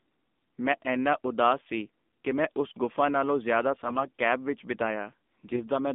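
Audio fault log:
Throughout: AMR narrowband mobile codec. Speech sits within about 200 Hz to 3.6 kHz. It sounds plainly buzzy and synthetic, which fits a low rate near 7.4 kbps.
5.46 to 5.62 s: AMR bit errors. Speech turns hoarse and gargly across several frames. A few percent of bits were flipped, which scrambled the pulses driving the voice model.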